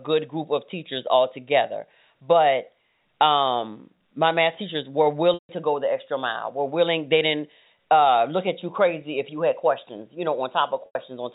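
A held, buzzy tone fading out at 5.34–5.49 s, between "my math teachers were" and "to go the extra", and at 10.86–10.95 s is packet loss with pitch repetition: lost audio was bridged by repeating the last pitch period.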